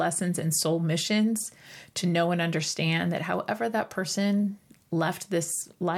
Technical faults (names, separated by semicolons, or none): none